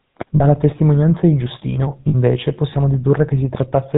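It's a short speech clip squeezed through the GSM full-rate codec the whole way: everything's cut off above 4 kHz, with that buzzy, gravelly roughness from a pulse-driven vocal-tract model, which fits the old 13 kbps rate. You'll also hear lost GSM frames twice. At 0.36 to 0.41 s, just before "testimonianza di," there's a 40 ms gap, and at 2.08 to 2.15 s there's a 60 ms one. Each is bridged by repeating the last good frame, which gives a brief metallic ring, consistent with two and then three dropped 20 ms frames.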